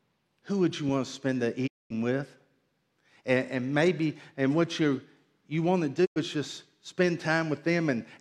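The speech fades out within about 20 ms and falls silent from 1.66 to 1.92 s, after "want to spend the", and again from 6.04 to 6.18 s, between "you you want to" and "is just spend". Both gaps are digital broadcast dropouts. The receiver muted when frames failed, which fits runs of several lost frames, so the audio sent during each gap is gone.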